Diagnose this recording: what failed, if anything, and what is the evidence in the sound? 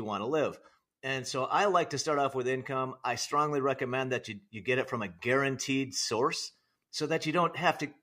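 Nothing in the recording points to a failed stage anywhere in the chain. The speech gives no audible evidence of a fault that would need a mechanism to explain.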